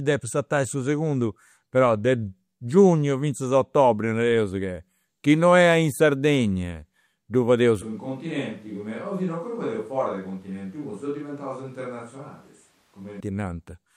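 Right after "ddu fadeus", from 7.82 to 13.20 s, the speech turns hollow, roomy and thinner, dropping roughly 5 dB, with room noise around 35 dB below it, a switch to a distant microphone, likely after the close microphone dropped out. The waveform shrinks abruptly, and the spectrogram shows reduced low end and smeared, reverberant tails.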